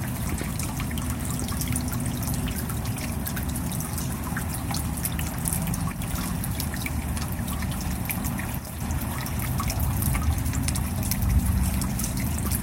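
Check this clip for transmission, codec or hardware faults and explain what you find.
Two brief level drops occur, at 5.92–5.99 s and 8.58–8.81 s. Each is a sudden fall of about 6 dB, likely one channel dropping out before the mono sum.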